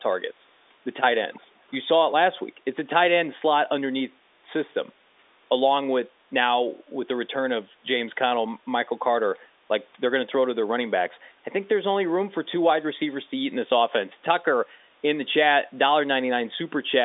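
From 1.34 to 1.43 s a short, faint delayed copy of the speech appears, trailing the original by 249 ms and sitting around 30 dB below it. This is likely an echo leak: a far-end loudspeaker's sound slipped past its echo canceller and returned down the line. Unlike room reverberation, it is a separate repeat after a clear gap rather than a smooth decay. Unlike the G.711 quantisation noise on this telephone line, it does not follow the signal continuously.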